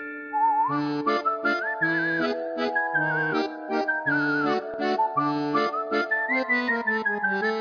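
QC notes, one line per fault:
No faults heard anywhere in this clip.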